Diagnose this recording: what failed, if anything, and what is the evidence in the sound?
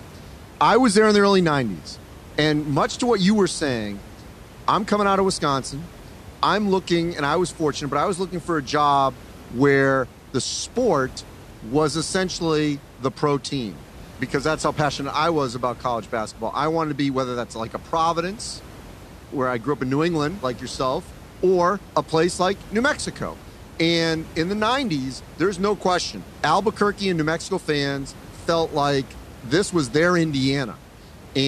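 Nothing in the signal chain has failed: the speech sits on a steady bed of room noise about 20 dB below it, which belongs to the recording space rather than to any stage of the system.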